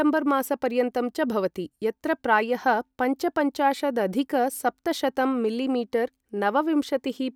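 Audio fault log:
No faults detected in this recording.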